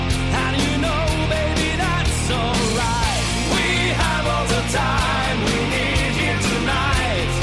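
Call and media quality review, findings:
No faults turned up anywhere in this one, so there's nothing to log against it.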